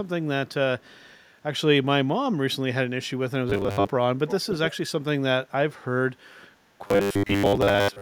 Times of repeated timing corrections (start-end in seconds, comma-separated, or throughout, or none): none